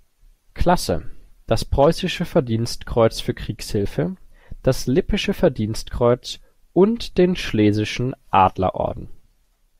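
No technical faults can be heard anywhere in the recording; the signal stays continuous and steady throughout.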